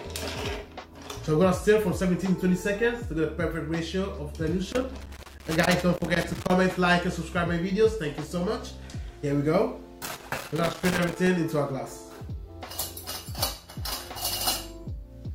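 Loose connector crackle appears from 4.72 to 6.52 s and again from 10.06 to 11.27 s: a worn or dirty contact keeps making and breaking, chopping the signal into an irregular burst of scratching. Unlike steady hiss or regular dropouts, its timing is erratic.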